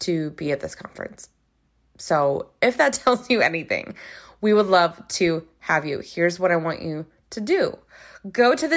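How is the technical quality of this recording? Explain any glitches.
The recording has no technical glitches to explain; the speech signal stays intact and continuous throughout.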